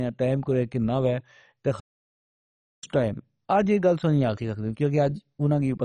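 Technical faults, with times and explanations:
Throughout: MP2 compression. The speech sounds dull, with nothing above 10.4 kHz and a gurgling, granular edge as upper sub-bands drop in and out and the rest are coarsely quantised. The heavy damage likely comes from MPEG Layer II coding at a starved rate, which fits about 32 kbps.
1.80–2.83 s: playback stall. The speech halts mid-flow and the output goes silent for 1.03 s before continuing. This is likely the player running short of data or its audio thread being blocked, so nothing reached the output until it recovered.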